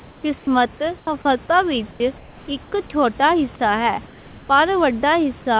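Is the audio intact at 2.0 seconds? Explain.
No. Comfort noise in place of the background runs from 1.91 to 2.0 s, ending right at that point. For about 90 ms the room background becomes a steady, featureless hiss, about 4 dB quieter. The likely cause is discontinuous transmission, with the receiver synthesising noise during the pause.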